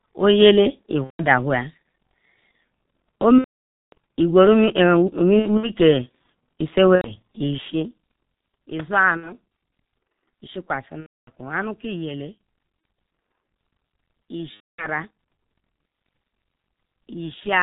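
Speech, carried through a heavily damaging G.723.1 codec at 6.3 kbit/s. It sounds muffled and hoarse throughout, with blurred consonants and nothing above 4 kHz. VoIP packet loss concealed by the speech codec hits at 1.04, 3.38, 5.39, 6.95, 9.17, 11.00, 12.80 and 14.54 s. The decoder stretches its last sound into a fading buzzy tone or coloured noise, muting from the third lost frame in a row, worst at 3.38 to 3.93 s, where 540 ms is missing.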